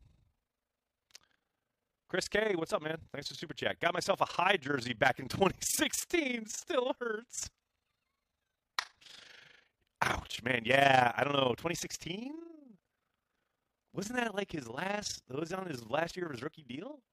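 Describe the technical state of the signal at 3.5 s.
A fast, rough flutter runs through the speech at 3.5 s, as everywhere in the clip: overlap-add ripple, the level pulsing about 11 dB at around 30 per second from frames rejoined with uneven overlap gain.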